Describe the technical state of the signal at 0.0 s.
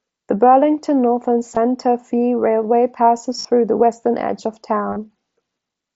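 At 0.0 s the speech is intact, with no fault present, and it is carried over a Bluetooth mSBC headset link that limits the bandwidth to about 8 kHz.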